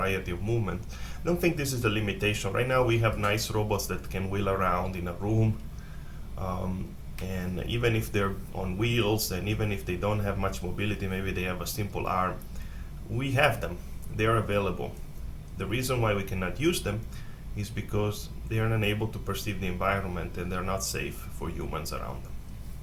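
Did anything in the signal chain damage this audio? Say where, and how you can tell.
Yes, two things got in. At 14.44 s there's a single bit error spike, one isolated tick that pops out across the whole spectrum and has nothing to do with the surrounding audio. It's one sample, peaking at about -36 dBFS, exactly what you get when a single bit flips in memory or on a digital link: the value jumps by a power of two for one sample and snaps straight back.

From 18.26 s to the end there's USB whine, a steady fixed-pitch tone sitting at 1000 Hz, roughly 40 dB under the signal. That pitch is the giveaway. The USB bus works in 1 ms frames, and the current it pulls at that rate is leaking into the analogue side through the power or ground. So this is a wiring and grounding problem around a USB-powered device, not something in the audio itself.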